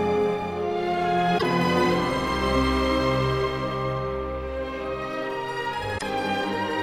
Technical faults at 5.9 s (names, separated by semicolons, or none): damaged data in a compressed stream